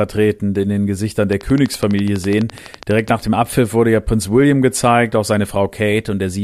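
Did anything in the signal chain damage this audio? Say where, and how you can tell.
Yes. From 1.33 s to 3.09 s, just before "nach dem", a train of clicks ticks over the speech at a steady 12 per second, about twenty near-identical pulses in all, peaking roughly 5 dB above the speech and audible in the pauses too. The stage is likely the analogue wiring or interface picking up interference from nearby equipment. Buffer dropouts would leave gaps in the speech, and vinyl-style crackle would be random and varied, not this same-shaped, evenly spaced pulse.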